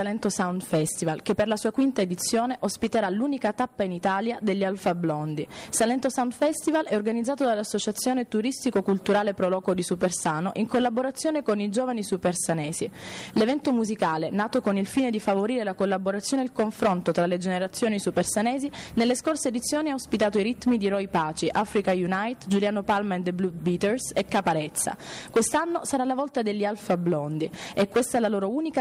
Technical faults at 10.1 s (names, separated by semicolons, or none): none